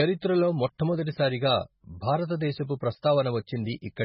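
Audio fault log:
Throughout, MP3 compression: the speech has nothing above 5.5 kHz and a heavily watery, swirling texture, with s sounds turning into metallic chirps and consonant attacks smeared. The likely cause is an MP3 encoder starved of bits, consistent with a rate around 16 kbps, that cuts the treble and drops weaker frequency lines that flicker in and out between frames. That flicker separates it from a plain low-pass filter, which would only dull the sound.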